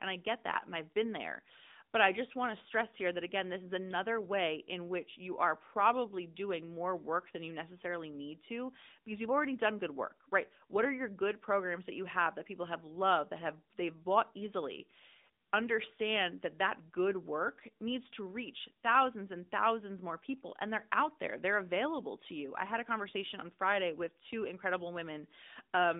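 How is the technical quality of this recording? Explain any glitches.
The recording is limited by mobile-phone coding for its whole length. AMR narrowband mobile codec damage runs throughout: the speech is squeezed into a 200 Hz to 3.7 kHz line band, sounds thin and plainly buzzy, and the degree of synthetic colouring fits a mid-rate mode around 10 kbps. The codec resamples to 8 kHz and rebuilds speech from a vocal-tract model excited by sparse pulses. A spectrogram shows a flat cut-off at 3.7 kHz with nothing above it.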